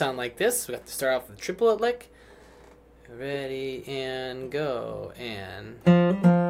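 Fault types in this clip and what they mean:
Nothing in this one stands out as a technical fault; it just sounds the way it was meant to.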